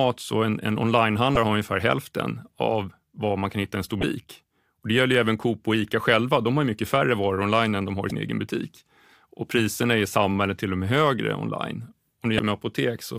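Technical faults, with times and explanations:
1.34–1.37 s, 4.00–4.03 s, 8.07–8.11 s and 12.36–12.39 s: damaged data in a compressed stream. You get four short glitches, each about 34 ms: between "så en en" and "har ungefär hälften av", right after "hitta i en stor", at 8.07 s, and after "och med högre online". Corrupted bytes throw the decoder off, so it loses sync and skips ahead to the next frame header, leaving a brief disturbance.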